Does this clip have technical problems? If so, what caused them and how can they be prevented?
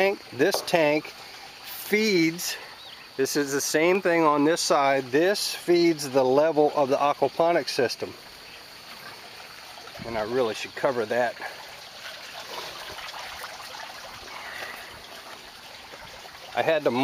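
Yes. From about 0.65 s to 15.5 s there's a regular click every 1.65 s, about ten in all, which points to clock drift buffer slips. Two devices are likely running on separate clocks about 100 ppm apart, so the buffer between them slowly drifts until a handful of samples gets dropped or repeated. To prevent it, lock both devices to a shared word clock or put an asynchronous sample-rate converter between them.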